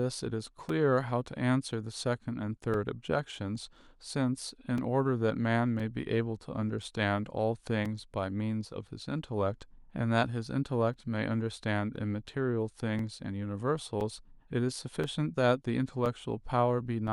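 Speech with periodic USB or driver dropouts: from 0.69 s to 17.08 s, a gap of a few milliseconds is cut out every 1.02 s and replaced with silence. This gives evenly spaced ticks, audible only while speech is present, as a stalled USB bus or audio driver drops samples.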